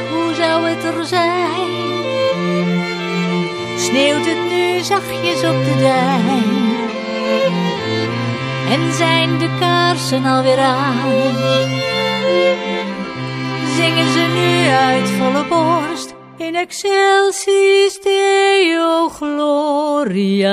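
Nothing in the audio stood out as a technical fault on listening.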